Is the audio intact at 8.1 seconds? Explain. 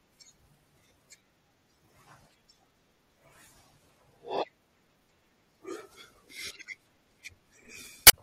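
No. From 8.05 to 8.14 s there is damaged data in a compressed stream: corrupted bytes make the decoder misread frames and lose sync while it hunts for the next frame header. The result is a brief chirp, squawk, click or short hole.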